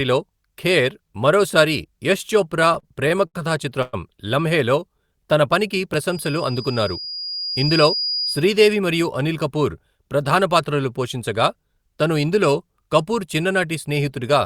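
From 2.49 to 3.36 s the speech suffers repeated stalls (stutter). Eight short gaps, the longest 67 ms, are bridged by continuing the last sound, about 160 ms in all, or roughly a fifth of that stretch. Nothing is lost, so the speech drags and hiccups rather than skipping.

At 3.82 to 3.95 s comes a single call audio freeze. The sound hangs as a fading continuation for 111 ms without dropping to silence, then resumes where it stopped. The likely cause is packets held up in transit, adding 111 ms of delay. It is one longer hold, not a chain of brief catches.

Between 4.80 and 5.27 s a jitter buffer slow-down stretches the speech to 91% speed by repeating tiny pitch-period slices, adding 50 ms. Pitch stays put and sounds are drawn out. There is no hold or break, which sets it apart from a freeze.

From 6.11 to 8.49 s a loudspeaker feedback squeal appears. A single 4.9 kHz tone swells over about a second and a half until it is roughly as loud as the speech. 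The loop's gain exceeded one at that frequency, so the tone keeps feeding itself. Unlike hiss or buzz, it holds one steady, growing pitch.

Overlapping the squeal, from 7.26 to 8.09 s, a jitter buffer speed-up trims short pitch-period pieces, roughly 70 ms in total, to reduce a backlog. The speech runs at 108% speed and sounds hurried, with its pitch unchanged. It is the mirror of the earlier slow-down.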